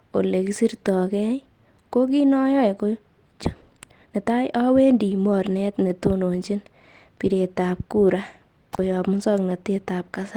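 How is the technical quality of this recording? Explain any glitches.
The recording has three distinct glitches, all in the first nine seconds or so.

Around 3.45 to 3.47 s, right after "ko kiit noyoe ko", there's a skip ahead: roughly 0.7 s of audio was dropped and playback jumps straight on with no gap.

From 3.55 to 5.72 s, a jitter buffer speed-up trims tiny pitch-period slices, about 0.4 s in total, so the speech runs at 116% speed, same pitch, sounding hurried before "netononchin bireet".

At 8.73 to 8.79 s there's an intermittent contact: a loose connection opens for about 39 ms, cutting the sound out with crackle at both edges.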